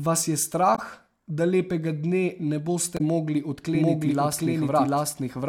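At 0.75 to 0.79 s and again at 2.97 to 3.01 s, the speech briefly breaks up, the sign of damaged data in a compressed stream. Corrupt bytes make the decoder misread those frames and lose sync until it finds the next valid frame header. The waveform has a small discontinuity where the audio resumes at each point.

From 3.75 s to the end, a doubled audio track appears. A second full-band copy of the speech runs roughly 0.7 s behind the first, at about the same level. It is likely an edit holding two copies out of step. The copy has no reverberant tail or room colouring, and it starts abruptly. On a spectrogram the harmonic patterns are repeated at a constant time offset, and the waveform becomes a dense overlap of two matching envelopes.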